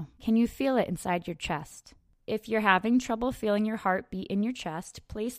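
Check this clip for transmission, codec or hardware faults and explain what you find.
No faults detected.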